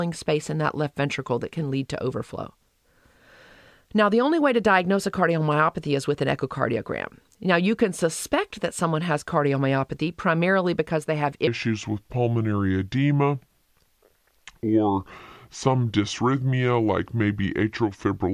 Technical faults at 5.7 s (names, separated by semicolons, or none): none